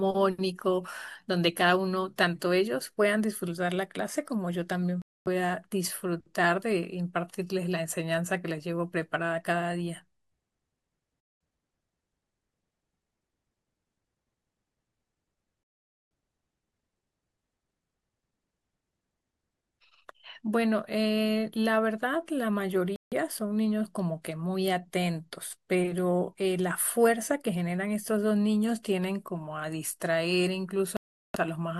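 Bluetooth stalls at 5.02, 11.20, 15.63, 22.96 and 30.97 s cut the speech to silence for about 0.24, 0.20, 0.48, 0.16 and 0.38 s before it resumes. The likely cause is a headphone buffer running dry while delayed packets were resent.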